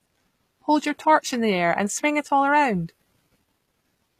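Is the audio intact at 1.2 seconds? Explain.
No. At 1.2 seconds, as throughout the whole clip, the speech carries plainly audible damage from what is likely HE-AAC compression, consistent with a low bitrate near 24 kbps. The treble is rebuilt from copied lower bands rather than coded, so s sounds turn gritty and metallic, and nothing remains above 15 kHz.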